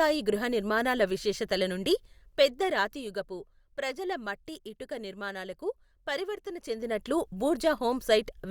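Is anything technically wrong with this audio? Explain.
No, nothing is technically wrong.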